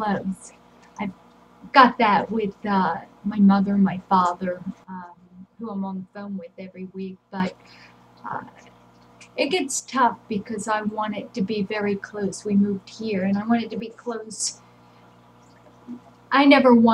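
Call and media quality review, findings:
Sudden gain jump, 4.84 to 7.4 s: level falls about 12 dB in one step, background noise dropping with it; likely unramped digital gain change. 9.8 to 9.92 s: brief drop of about 6 dB, likely the same stage. 13.8 to 14.4 s: about 6 dB step down and back, likely a gain or bit-shift setting. The noise floor moving in lockstep and the instant edges, with no attack or release ramp, rule out AGC or compressor action.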